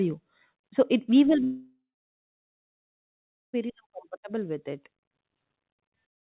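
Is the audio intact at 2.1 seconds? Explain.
No. At 2.1 seconds the audio is missing. Just after "it we will", at 1.44 s, the last sound trails off as a fading buzz or hiss and then goes silent until about 3.55 s. This is likely a long network dropout, with the lost stretch concealed and never recovered.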